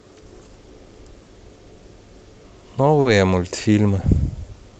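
At 1.22 s and again at 3.01 s, the speech briefly hangs: a sound is held about 50 ms and then about 40 ms too long, with a slight buzz or dip. Both are a short stall from a late packet; the jitter buffer ran dry, stretched the last audio, then resumed with nothing lost, over a call path whose top end stops near 8 kHz.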